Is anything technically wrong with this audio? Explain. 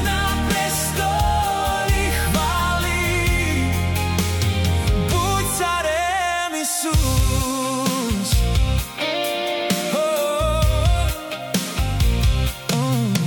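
Yes. An integer overflow occurs at 4.19, 7.20, 8.34, 9.70, 11.54, 12.70 and 13.15 s. Loud peaks exceeded the largest integer and wrapped to the opposite sign instead of being limited, so each peak flips across the full range and gives a violent, sharp crack.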